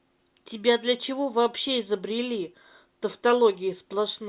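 A short bit of speech, and there's nothing technically wrong to hear anywhere in it.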